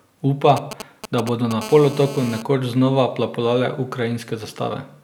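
From 0.57 to 1.53 s the speech is overlaid with GSM signalling bursts: short clusters of raspy ticks and brief buzzes that fall into a galloping dit-dit-dit rhythm. A nearby 2G handset is exchanging control traffic with the network, and the audio circuitry rectifies those radio pulses into the signal path. The buzz fragments repeat at about 217 Hz, the GSM frame rate, and sit roughly 10 dB below the speech.

From 1.61 to 2.42 s a continuous GSM phone buzz replaces the intermittent pattern. It is a hard, harmonically dense rasp at 217 Hz that is unrelated to the speech and holds steady throughout, as a handset in an active call transmits its bursts without interruption. The circuit again demodulates the RF envelope into audible interference. At about 15 dB below the speech it is about 5 dB quieter than the earlier bursts.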